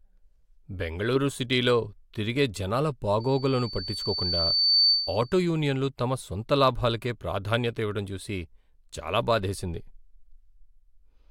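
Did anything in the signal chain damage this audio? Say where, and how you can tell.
Yes. From 3.2 to 5.34 s, between "బెంగళూరు సిటీలో తిరిగే జనాల" and "యూనియన్లు తమ సొంత లాభాలకే", a pure 4.5 kHz tone swells over about a second and a half to sit above the speech. This is loudspeaker feedback squeal: the microphone picked up its own loudspeaker, and loop gain above one let that frequency grow.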